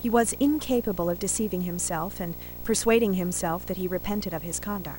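Video or display buzz coupled from video wiring hums throughout the speech: a 59.94 Hz buzz and a 15.7 kHz whine, shown as steady horizontal spectrogram lines.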